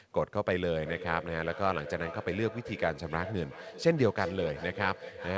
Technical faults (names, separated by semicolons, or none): feedback echo between two devices